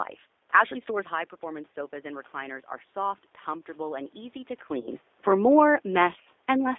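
From start to finish the speech carries G.729 codec damage, plainly audible. This 8 kbit/s codec rebuilds speech from a filter, a pitch predictor and a few pulses per frame. The band runs only from 300 Hz to 3.6 kHz. The result sounds narrow, rough and slightly synthetic.

From 4.80 to 4.88 s there is VoIP packet loss concealed by the speech codec. About 40 ms of audio went missing, which fits two lost packets. The decoder stretched its last frame into a sound that fades. The sound stays weak briefly afterwards.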